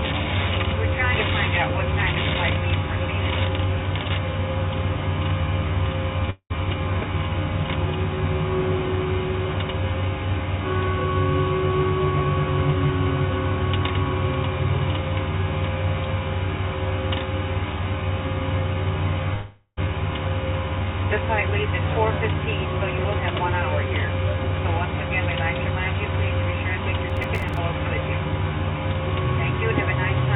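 A recording of everyday sounds, carried over a call link whose spectrogram is empty above 4 kHz, which fits a G.711 A-law codec at 64 kbps, shows two breaks that sound like a long network dropout, the likely cause. From 6.30 to 6.52 s about 200 ms is lost, and from 19.34 to 19.89 s about 440 ms. In each, the last sound carries on as a fading buzz or hiss before a short silence (70 ms, then 60 ms). The spectrogram shows a smeared, repeating band thinning to a blank strip, and the sound resumes further on with the lost part missing. From 27.10 to 27.57 s, processor overload crackle appears: around ten buffer deadlines are missed, and each miss drops in a tiny silent hole, which fits buffers of roughly 3 ms. Together these holes produce a gritty tearing over the sound. The waveform shows small hard-edged notches, and the spectrogram shows a cluster of thin vertical broadband streaks.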